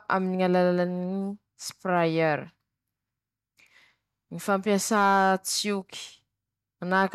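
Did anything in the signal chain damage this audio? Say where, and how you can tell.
Yes. Hard clipping damaged the speech at the converter or a fixed-point gain stage. It occurs at 1.96 to 2.01 s, 4.95 to 5.32 s and 6.94 to 7.03 s. The first event only just reaches full scale, so it adds a brief crackle. The later two overshoot by about 2 dB and sound harsher and fuzzier. The stage ran out of headroom, so the peaks were cut flat. Those flat tops add high harmonics.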